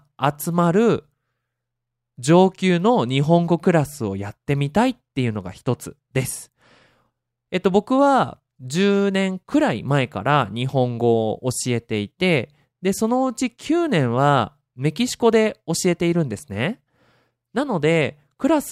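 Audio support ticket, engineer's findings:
Nothing to flag on this speech recording: no audible faults anywhere, so there's no component to chase and the ticket can be closed.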